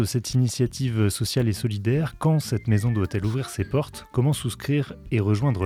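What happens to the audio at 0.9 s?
Nothing goes wrong at 0.9 s; the audio plays through that moment intact, with no fault to be heard.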